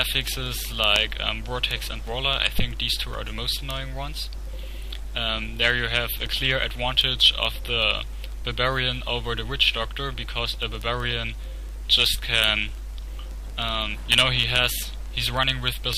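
From about 0.15 s right through to 15.93 s there's a steady run of word clock ticks, roughly every 70 ms, so a few hundred over the stretch. That's a digital link being read by a device on its own clock rather than locked to the sender's. The two clocks disagree by something on the order of a few hundred parts per million, and each time they slip past each other a single sample gets dropped or repeated, leaving a sharp tick in the sound.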